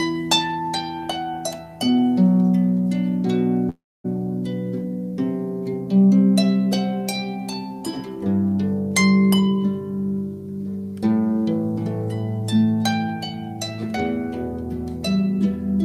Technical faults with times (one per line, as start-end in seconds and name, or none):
3.69-4.06 call audio freeze
9.34-9.58 jitter buffer speed-up